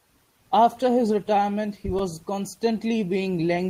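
At 1.99 s the speech has a repeated buffer fault. The playback device did not receive fresh audio in time, so it replayed the last short block, a piece about 2.7 ms long that fits a 128-sample buffer, several times in a row. Because each repeat is so brief and butts against the next with a hard join, the result is a tiny click or buzz rather than an audible stutter. Essentially no audio is lost. The content is only delayed slightly.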